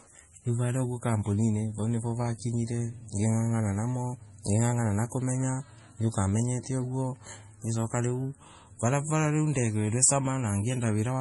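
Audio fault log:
Throughout, MP3 compression: watery swirl and nothing above 11.4 kHz, likely from a heavy encode around 32 kbps; a simple low-pass filter leaves no swirl.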